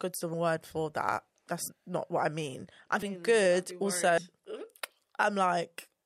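Speech with compressed frames skipped twice: at 1.68 s, after "word for that", about 70 ms vanishes, roughly two frames; at 4.18 s, after "mm good", about 150 ms, roughly four. The jump sizes fit a 32 ms frame.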